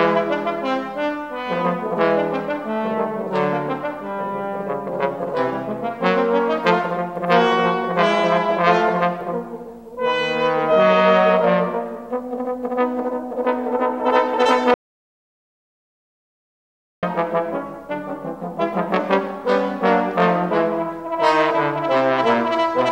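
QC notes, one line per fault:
14.74–17.03 s, audio dropout to silence: the sound cuts off mid-flow and is replaced by about 2.29 s of silence, with no room tone or noise floor underneath, then resumes just as abruptly. That flat silence points to the input feed itself disappearing while the recorder kept writing samples, likely a momentary disconnect, link failure or accidental mute. Whatever occurred during that span is unrecoverable from this file.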